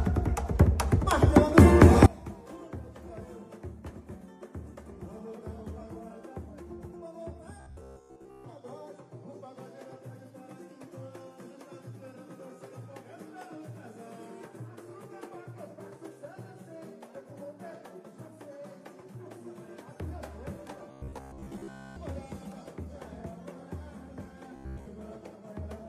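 From 2.06 s to the end, the sound drops by about 24 dB and turns faint, likely from one channel inverted, cancelling the shared content in mono. At 7.60 to 8.44 s, 20.91 to 21.96 s and 24.56 to 24.87 s it becomes a rigid, metallic 66.7 Hz buzz, likely robotic sound from repeated short buffers, with roughly 15 ms segments looping over most of the material.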